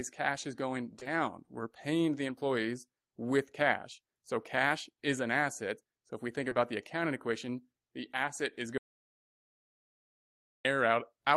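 Speech clip where packets arrived too late for the decoder around 0.99 to 1.07 s and 6.49 to 6.57 s, so the receiver concealed each gap with 40 ms of extrapolated sound, heard as a brief smear. From 8.78 to 10.65 s there is an audio dropout to silence, likely from a lost input, muting about 1.9 s with no room tone.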